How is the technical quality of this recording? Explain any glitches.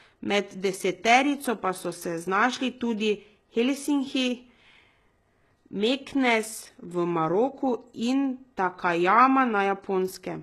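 The recording has a heavy, constant coding artefact through the whole speech. The treble sounds synthetic, sibilants come out gritty and lispy with a metallic sheen, and nothing is present above about 12.3 kHz. The likely cause is HE-AAC compression at a very low bitrate, consistent with roughly 16 kbps. The encoder keeps only the lower spectrum and fakes the upper bands by copying lower content upward under a coarse envelope, so the rebuilt harmonics don't align with the real ones.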